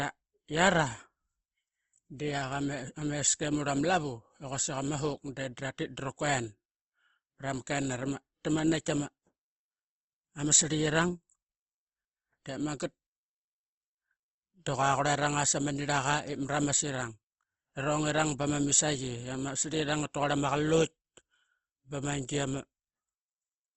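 This speech recording has been pushed through a low-bitrate encoder, likely Opus compression, running in its music-style mode and limited to wideband, which points to a rate around 16 kbps. Short of bits, the codec fills bands with noise or copies of lower bands rather than leaving gaps, so the voice throughout sounds rough and grainy instead of swirly, and nothing remains above about 8.2 kHz, dulling sibilants and breath detail.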